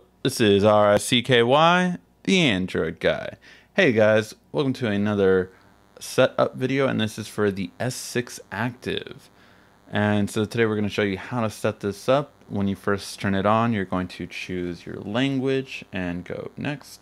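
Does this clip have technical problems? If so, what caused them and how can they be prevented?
Yes. From about 4.89 s to the end there's a DECT cordless phone buzz: a thin, steady 100 Hz buzz with lots of harmonics, sitting roughly 40 dB under the sound. A nearby DECT handset or base fires a radio burst every 10 ms and the audio circuitry rectifies it. Keep DECT gear well away from the recording chain.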